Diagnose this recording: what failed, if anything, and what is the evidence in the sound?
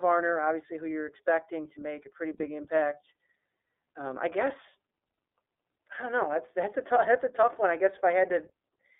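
The codec stage is responsible for the steady degradation. The speech runs through the iLBC codec for its whole length, and the damage is plainly audible: slightly rough, synthetic vowels and a thin telephone tone limited to about 300 Hz to 3.5 kHz. On a spectrogram, energy stops sharply near 3.5 kHz with nothing above. The coarse frame-by-frame excitation coding fits iLBC's 13.33 kbps mode with 30 ms frames.

The network stage caused a brief loss of iLBC frames. Right after "to make a pretty", from 2.37 to 2.41 s, the sound becomes a held, faintly buzzy vowel. The decoder repeated the last pitch cycle with added noise to conceal the missing packet. A spectrogram shows frozen, evenly spaced harmonics with a noisy haze, and the waveform shows a short run of near-identical cycles. The gap fits a single lost 30 ms frame, and the sound recovers at once because each frame decodes independently.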